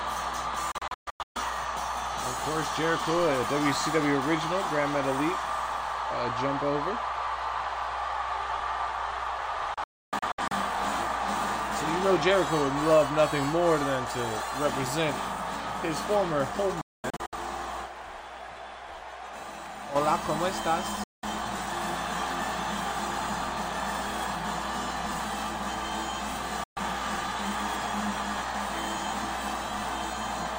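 Digital broadcast dropouts hit at 0.72, 9.74, 16.81, 21.04 and 26.64 s: the receiver loses good frames and mutes in quick, scattered holes, up to 0.3 s each.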